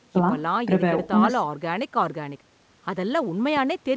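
Speech carried over a WebRTC call path with nothing above 8 kHz, consistent with a G.722 wideband connection, has no audible technical fault.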